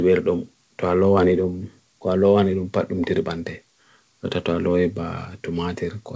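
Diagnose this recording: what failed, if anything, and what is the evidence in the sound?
Nothing failed here.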